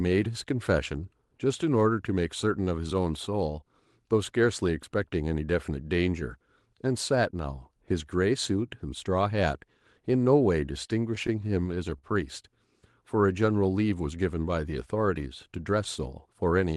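A speech recording that drags and catches in a rapid series of repeated stalls (stutter) between 10.99 and 12.04 s. Nine short hitches fall in that second, the longest about 45 ms, where each sound is briefly held on rather than cut. Packets were arriving late or more slowly than they played, so the jitter buffer kept running dry, and the receiver stretched the last sound each time. Roughly 125 ms was filled this way, about 12 percent of that stretch, with nothing actually lost. The call path ahead of it adds Opus coding noise and a top end that stops around 12 kHz.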